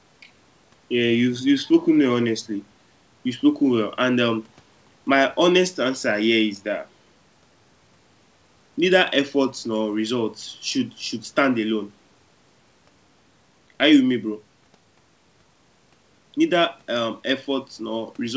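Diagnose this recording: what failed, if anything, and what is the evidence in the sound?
Nothing failed; the call path sounds as expected here.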